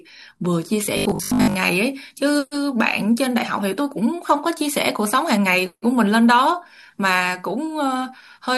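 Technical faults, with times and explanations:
0.86–1.56 s, robotic sound from repeated short buffers: the speech collapses into a rigid, metallic buzz pitched at 50 Hz, loosely tracing the syllables. The likely cause is new audio arriving too slowly, so playback keeps looping the most recent slice, about 20 ms long to match that 50 Hz buzz. Each loop repeats the same fragment while roughly 70% of the real audio is skipped.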